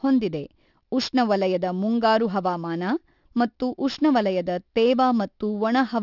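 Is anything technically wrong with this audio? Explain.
Yes. Aliasing runs throughout the speech: content above 6 kHz folds back below it, which fits an unfiltered downsample to 12 kHz, leaving sibilants gritty and metallic, with the folded-back content about 20 dB down.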